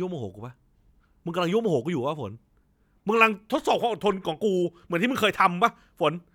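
No technical faults can be heard at any point in the speech recording.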